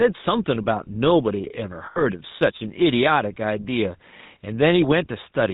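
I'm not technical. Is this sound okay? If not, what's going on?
No, there are a few problems. All the way through you can hear gain pumping: the quiet and loud parts end up closer in level, so everything sounds a bit squashed. That's likely the input turned up too high, with an automatic limiter reining it back in each time.

The whole clip has also gone through the GSM full-rate codec, the original mobile phone format. It cuts off all the higher sounds and gives the voice a buzzy, gravelly edge, and the damage is plain to hear here.

Then, from 1.86 to 2.03 s, there are lost GSM frames. A short stretch of the call never arrived, so the phone kept repeating the last bit it had. That produces a brief rough, metallic ringing instead of the real speech.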